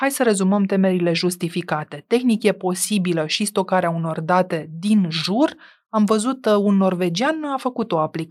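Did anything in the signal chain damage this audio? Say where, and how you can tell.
No, nothing in the signal chain damaged this speech recording. No point in the audio carries evidence of trouble at any stage between capture and playback.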